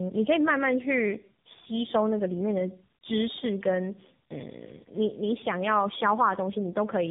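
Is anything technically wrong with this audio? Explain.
Yes. Throughout the clip there is tandem speech coding. The audio sounds like it passed through three separate speech codecs in a row, with AMR-NB last and G.711 links in between. At each border the signal was decoded and re-encoded, so each coder had to model the artefacts left by the one before it. The damage compounds. The speech is rough, muffled and warbly, and nothing remains above 3.7 kHz.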